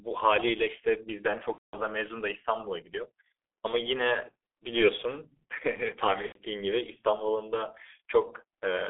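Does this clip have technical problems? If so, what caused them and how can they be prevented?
Yes. The whole clip passed through a G.723.1 codec whose coarse, slowly updated voice model and 300 Hz to 3.4 kHz band, consistent with roughly 6 kbit/s, leave speech muffled and hoarse with smeared consonants. Use a wideband, higher-bitrate codec such as Opus or G.722 on the call path.

VoIP packet loss concealed by the speech codec occurs at 1.52 to 1.77 s and 6.26 to 6.40 s. The decoder extrapolated the last pitch and filter across gaps that fit seven and three lost 30 ms frames, turning speech into a fading buzz or coloured noise that stays weakened as packets resume. Prevent it with a stable, prioritised network path, QoS marking and a jitter buffer, plus forward error correction.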